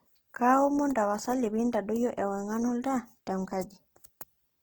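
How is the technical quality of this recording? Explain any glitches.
The recording has plainly audible codec damage from start to finish. Opus compression, throughout: the sound points to a likely low-rate Opus CELT encode, fitting 16 kbps. Starved bands get filled by folding or noise, so the speech sounds rough and grainy, while bandwidth stays full to 20.4 kHz.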